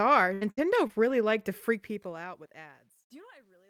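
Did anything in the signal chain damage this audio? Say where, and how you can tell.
Yes. Network stage: repeated packet loss (robotic sound) from 0.33 to 1.14 s, five gaps up to 77 ms, each patched with repeated sound rather than silence, hence choppy.

Sample-format conversion during the smooth fade-out from about 1.6 s: truncation distortion on a fade, from 1.60 s and worst after 2.88 s. The grit follows falling level, fitting 11 undithered bits.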